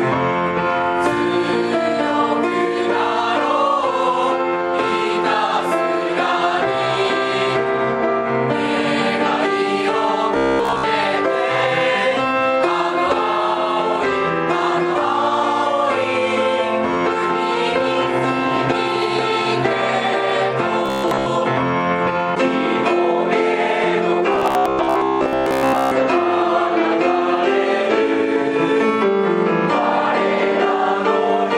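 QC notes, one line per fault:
10.37–10.84 s, 20.86–21.26 s, 24.33–25.93 s: robotic sound from repeated short buffers. A 66.7 Hz buzz from a likely 15 ms chunk looping. The spectrogram shows evenly spaced harmonic stripes, and the waveform shows repeating cycles.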